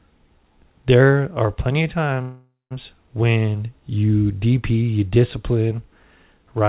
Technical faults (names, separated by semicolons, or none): call audio freeze